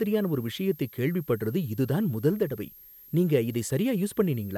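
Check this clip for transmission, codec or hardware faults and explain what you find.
A hardware fault runs through the whole speech clip: a switching supply whistle.

From start to finish, a thin, steady whistle sits near 12.8 kHz, wandering only between about 12.81 and 12.82 kHz, roughly 25 dB below the speech. A switching power supply in the chain is running in an audible burst mode or beating with another supply, and its ripple leaks into the audio path. The result is a faint high whine. On a spectrogram it shows as a fine horizontal line across the full length. The waveform looks unchanged.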